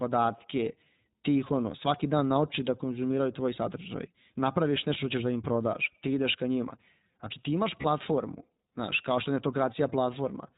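From the start, the speech carries the sound of the iLBC codec. It is narrowband. Nothing above 4 kHz gets through, so the top of the sound is cut away. The damage is plainly audible. Each 20 ms frame's excitation is coded on its own, and the result sounds slightly rough and synthetic. The grain fits a rate near 15.2 kbps.

At 7.82 to 7.86 s there are lost iLBC frames. The gap is tiny, about one frame, which fits a single lost 20 ms packet. The decoder filled it by repeating the last pitch cycle mixed with noise. That gives a brief held, faintly buzzy blip. Because iLBC frames stand alone, the sound recovers almost at once.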